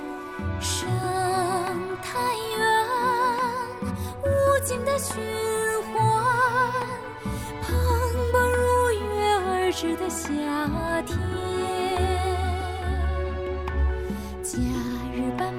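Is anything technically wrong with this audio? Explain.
No, nothing technically wrong is audible anywhere in the clip.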